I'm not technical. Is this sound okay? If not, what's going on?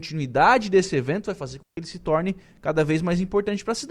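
No, there's a digital wireless dropout at 1.63 s. The wireless link carrying the speech lost too much data, so the receiver muted itself for about 0.15 s. You hear a clean gap of near silence, with no crackle or hiss before or after it.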